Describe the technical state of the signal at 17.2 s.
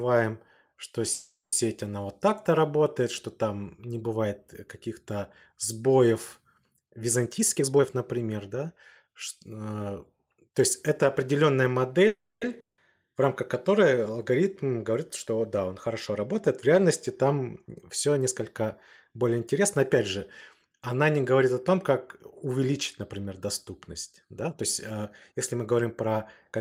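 At 17.2 s the signal is intact, with no audible fault at that moment.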